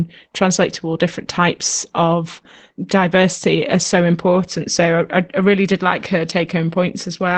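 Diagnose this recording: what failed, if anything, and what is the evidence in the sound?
The codec stage failed: Opus voice compression is plainly audible throughout the speech, which sounds muffled, hoarse and slightly robotic, with nothing above about 8.6 kHz. This fits SILK in wideband mode at a low bitrate around 12 kbps, where the excitation is coded only coarsely.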